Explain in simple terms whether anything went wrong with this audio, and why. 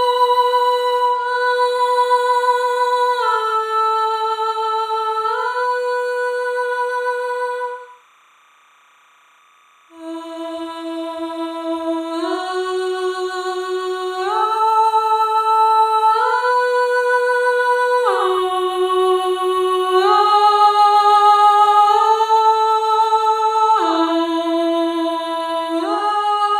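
Something did go wrong. From start to finish there is a faint chirping warble behind the sound. That is timecode bleed: a timing signal from a nearby track or cable has leaked into the audio. The signal flips rapidly between two pitches, around 1 kHz and 2 kHz, in a pattern tied to 29.97 video frames per second. Unlike mains hum or a single steady whine, it keeps jumping between two tones, which gives the chattering texture.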